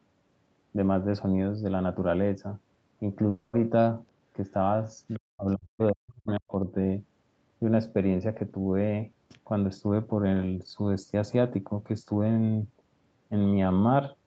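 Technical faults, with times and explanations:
3.29–3.55 s, long network dropout: about a quarter second of audio likely never arrived; the receiver stretched the last sound into a fading buzz, and the lost part is skipped.
5.10–5.19 s and 5.49–5.53 s, other side's voice leaking through: faint scraps of a second voice, about 30 then 40 dB below the talker, likely loudspeaker echo the canceller missed.
5.19–6.67 s, speech suppressed in double talk: the talker's voice dips, by as much as about 40 dB for roughly a second, likely because the echo canceller turned down both sides during overlap.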